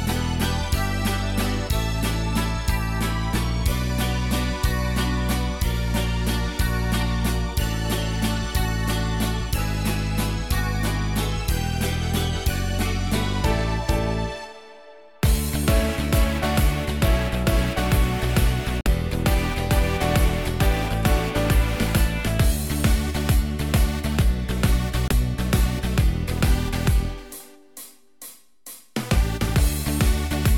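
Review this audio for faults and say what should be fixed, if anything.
Two brief holes cut the audio, from 18.81 to 18.87 s and from 25.08 to 25.12 s. The sound stops and resumes as though it had kept playing, which points to a Bluetooth dropout, most likely from packets reaching the headphones too late and being discarded. The gaps fit about two lost frames and then one, at roughly 23 ms each. On a waveform each shows as a flat line, and on a spectrogram as a clean vertical blank band. Keeping the source close to the headphones with a clear line of sight, and away from busy 2.4 GHz Wi-Fi, should prevent it.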